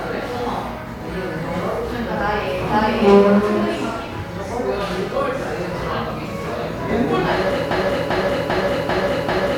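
At 7.71 s a broken-record loop begins: a 0.39 s fragment repeats exactly five times to the end, likely from a stalled player or stream, replacing the intended sound.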